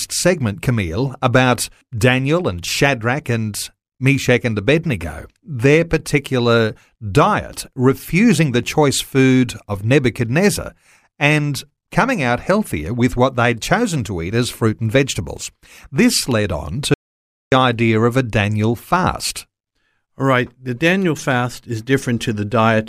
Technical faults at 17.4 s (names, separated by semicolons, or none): audio dropout to silence